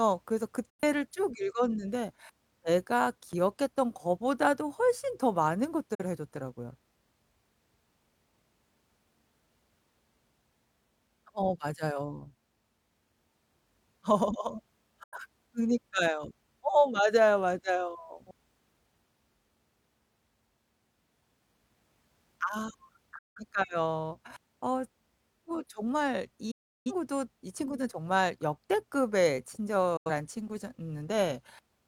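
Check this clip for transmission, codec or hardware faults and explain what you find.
Yes, there is a digital broadcast dropout, recurring six times: 0.70–0.83, 5.94–6.03, 15.03–15.17, 23.18–23.41, 26.51–26.92 and 29.97–30.10 s. The receiver rejects corrupted frames and mutes, so the speech fades out within about 8 ms into true silence. Gaps come in steps of roughly 43 ms, up to about 340 ms, which fits whole frames being dropped. Clean silence, rather than a click or a smeared, repeated fill, sets this apart from concealed packet loss.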